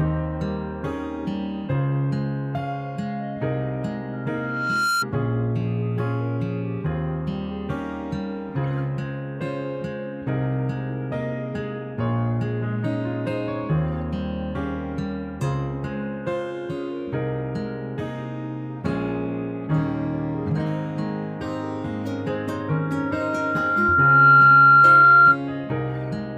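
Around 4.13 s a loudspeaker feedback squeal kicks in: a steady 1.4 kHz tone swells over most of a second, peaks a little above the rest of the sound, and is gone by 5.06 s. The mic is hearing its own speaker, and at 1.4 kHz the loop gain tips past one. The same 1.4 kHz tone returns at 22.68 s, climbs more slowly over a second or two, towers well over everything, and hangs on until 25.39 s.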